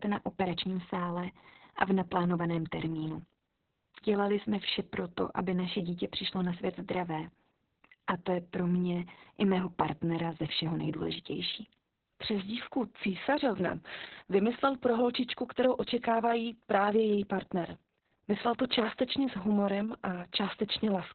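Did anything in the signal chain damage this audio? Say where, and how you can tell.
Yes. Opus voice compression damages the speech at the codec stage for the whole clip. Nothing is heard above about 4.3 kHz, so the sound is narrowband and muffled, and the speech comes out hoarse and slightly robotic. This points to Opus running its SILK linear-prediction coder at a very low bitrate, around 6 kbps, probably with long 60 ms frames. The band is narrowed and the excitation is coded so coarsely that the natural voicing texture is lost.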